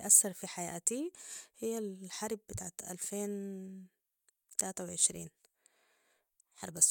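No technical faults are audible anywhere in the recording.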